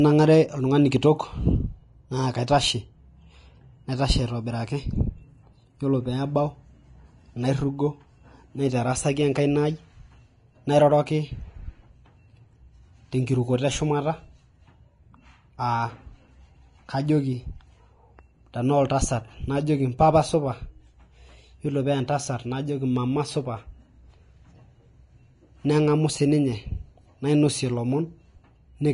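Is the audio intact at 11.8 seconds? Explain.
No. At 11.8 seconds, as throughout the speech, nothing comes through above about 10.6 kHz, and the treble that remains is hissy and grainy, with roughened tones and smeared consonant attacks. This is likely Vorbis compression at a low bitrate, around 30 kbps. The encoder quantises the upper residue so coarsely that detail turns into noise of similar energy. A plain low-pass filter would leave the band below 10.6 kHz clean, without this grainy hiss.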